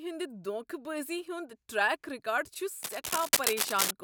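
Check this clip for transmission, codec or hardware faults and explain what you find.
One hardware fault shows up, near the end of the speech. From 2.82 to 3.91 s there is cable scratch noise, dense, uneven scratching about as loud as the speech, likely from a worn connector whose contact resistance flickers as it moves. Unlike isolated clicks, the bursts crowd together into continuous rustling.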